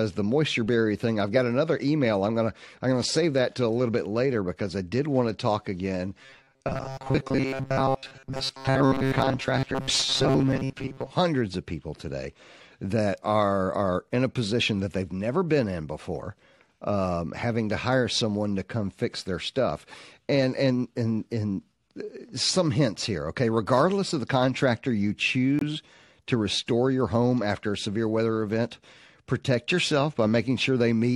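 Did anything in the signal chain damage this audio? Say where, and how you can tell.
Yes. At the driver or buffer stage, audio likely arrived too seldom, so short buffers repeated from 6.23 to 11.10 s, between "want to talk again" and "hundreds of people today", giving robotic sound with a 134 Hz buzz.

In the codec, one corrupt frame was muted: after "of the contractor you", a hole opens abruptly from 25.59 to 25.63 s, with timing kept.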